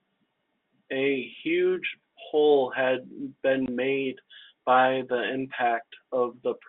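At 3.66 s the speech drops out for 20 ms, until 3.68 s. This is packet loss filled with silence. The gap fits one lost 20 ms packet. The receiver played silence in its place. The gap has hard edges, within the G.711 telephone band.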